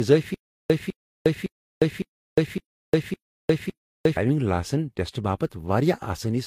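From the start, the speech carries the mixed artefacts of transcoding between lossy codecs. Two different codec colourings are heard at once, and nothing sounds above 16.7 kHz. This likely comes from one lossy encode, such as HE-AAC near 48 kbit/s, re-encoded to Vorbis near 34 kbit/s.

From 0.34 to 4.17 s there is stutter with silent gaps. A 203 ms burst of the same sound repeats seven times, each followed by 356 ms of digital silence. It returns every 559 ms. The audio of that span is lost. The likely cause is a stalled player replaying its last fragment.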